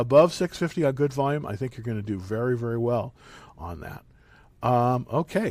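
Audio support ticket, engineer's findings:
Listened through the whole speech clip and nothing stood out, so no findings to log on this one.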